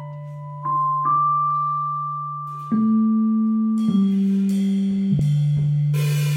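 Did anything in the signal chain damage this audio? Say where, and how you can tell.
Yes. At 5.18 s the music gives a brief glitch where the sound lurches forward by only a few milliseconds. That is compressed frames skipped, a fault at the codec decoding stage: about one frame of the encoded stream was never played, either missing from the file or rejected by the decoder as corrupt. The audio simply jumps ahead by the length of that missing frame.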